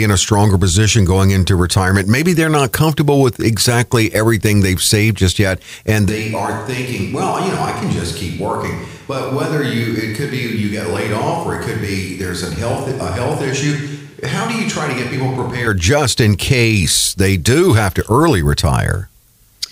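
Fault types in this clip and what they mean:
Switch to a distant microphone: From 6.1 s, right after "saved just yet and", the speech turns roomy and hollow. It loses bass and drops a few decibels in level. A faint room noise sits well below the speech. The change is abrupt both ways. At 15.7 s, just before "just in case they", the close, full sound returns. The likely cause is that the close microphone dropped out and a farther one took over.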